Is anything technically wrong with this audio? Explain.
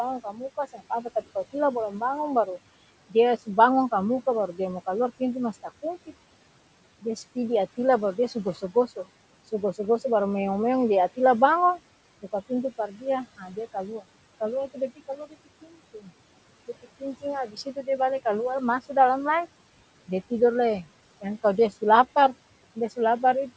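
Yes. Speech cut by the noise suppressor occurs at 0.24–1.54, 4.53–6.09, 7.02–9.08, 12.22–14.03, 14.74–16.10 and 16.68–17.88 s. The suppressor treated quieter speech as background and pulled it down by about 9 to 14 dB, a few hundred milliseconds at a time, leaving those parts swallowed and faint.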